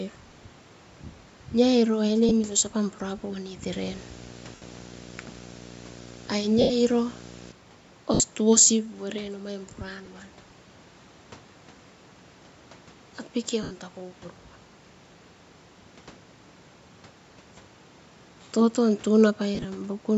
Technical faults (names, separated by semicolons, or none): lost LE Audio frames; video or display buzz